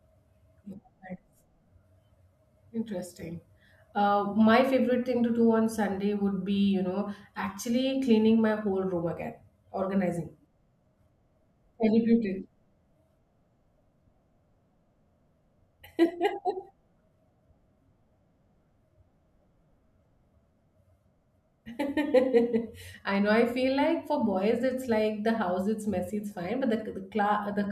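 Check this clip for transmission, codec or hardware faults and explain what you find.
No transmission, codec or hardware faults.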